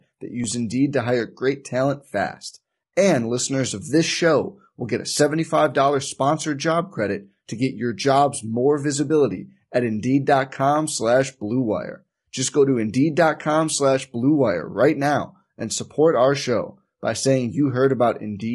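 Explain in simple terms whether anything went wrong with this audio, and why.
The speech was squeezed hard by what is likely low-delay AAC compression, the kind of encoding video calls use to keep the delay short. To stay fast, it works on very small slices of sound, which capture the voice's pitch poorly and leave little room for detail. From start to finish the voice sounds rough and grainy, with a hiss sitting between its tones, and the brightest, crispest part of the sound is dulled or comes across as artificial.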